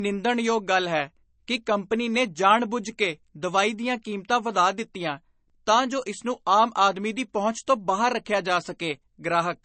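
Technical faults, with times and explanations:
Throughout: low-bitrate audio saved at a high bitrate. The speech has nothing above about 8.3 kHz and carries that smeary, swirly MP3 character, which fits a roughly 32 kbit/s MP3 likely re-saved at something like 320 kbit/s; the bigger file can't restore what the first pass stripped out.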